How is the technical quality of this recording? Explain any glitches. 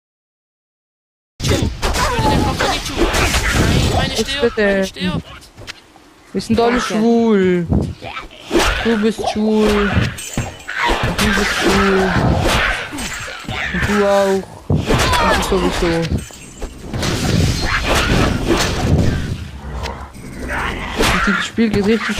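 The recording has one glitch, at the opening. It is a cut-off start. The first 1.40 s is digital silence. Capture began late, so sound enters abruptly at 1.40 s, mid-event, without natural attack.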